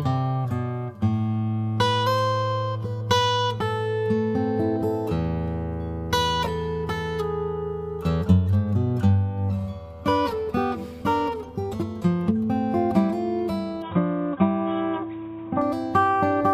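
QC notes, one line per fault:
13.82 to 15.62 s, input switched to a poorer device: the sound abruptly turns dull and boxy, with nothing above 3.8 kHz, and a faint new background noise appears, roughly 35 dB down. There is no gap at the switch and no obvious jump in loudness. The likely cause is a mid-recording change to a narrower-band input, such as another microphone or a headset call profile, which brings its own tone and noise before the original pickup returns.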